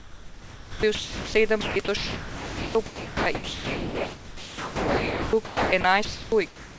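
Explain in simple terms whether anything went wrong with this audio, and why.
The speech keeps dropping out, from the start to 1.34 s and again from 1.61 s to the end, with gaps filled by a soft artificial hiss. This is sound chopped by the voice detector, likely cutting quiet parts and inserting comfort noise instead.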